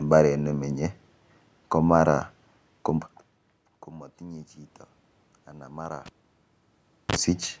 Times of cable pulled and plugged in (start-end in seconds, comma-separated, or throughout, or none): 6.06-7.16